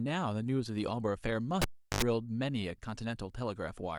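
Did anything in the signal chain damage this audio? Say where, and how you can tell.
Yes, the analogue wiring. At 1.62 s a cable gets pulled and plugged back in while live: a pop, then roughly 0.36 s with the connection broken, mostly near silence but ending in about 80 ms of 50 Hz mains buzz as the plug tip touches before the sleeve makes ground, and a second pop when the speech comes back at 2.02 s. That buzz-then-pop order is the tell: the unshielded, ungrounded moment picks up hum.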